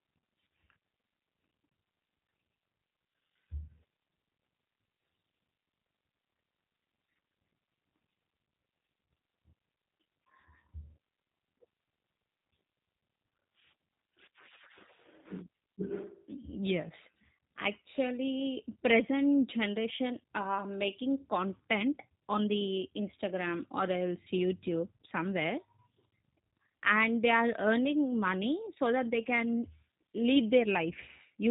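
From start to finish the speech carries G.729 codec damage: the voice is rebuilt from a vocal tract filter, a pitch predictor and sparse pulses, which fits an 8 kbit/s VoIP stream, so it sounds rough and synthetic. A spectrogram shows nothing above 3.8 kHz.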